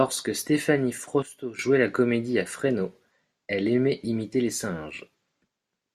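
At 1.23 s a sudden gain jump drops speech and noise floor together by about 12 dB, recovering at 1.59 s; the waveform shows a sharp step, likely an unramped gain change.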